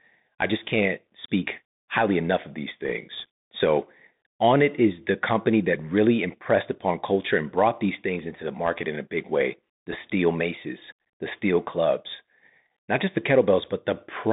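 From start to finish the speech carries a Bluetooth CVSD headset codec. The band runs only from 150 Hz to 3.7 kHz. The one-bit adaptive step lags on sharp, loud highs, so sibilants turn scratchy and a grainy hiss sits underneath. The damage is plainly audible, and the sound fits a 64 kbps link.

At 2.85 to 2.92 s, bit errors on a Bluetooth voice link add a brief rushing crackle. Flipped bits nudge the waveform slightly and fade quickly, so no hard click appears. The error rate here is around half a percent.

At 9.92 to 9.95 s, the same bit errors return, shorter but denser, at roughly one percent. The crackle is rougher for that instant.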